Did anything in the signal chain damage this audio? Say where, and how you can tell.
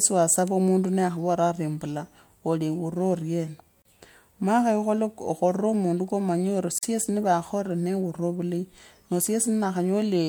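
Yes, at the codec stage: gaps at joins of encoded pieces at 3.82 s (32 ms) and 6.78 s (44 ms). Unlike packet loss, the speech resumes exactly where it stopped, because untrimmed encoder delay and padding leave silence between separately encoded pieces.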